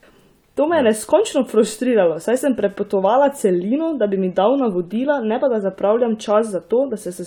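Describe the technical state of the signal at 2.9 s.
At 2.9 s the signal is intact, with no dropout, distortion, noise burst or other fault audible at that point.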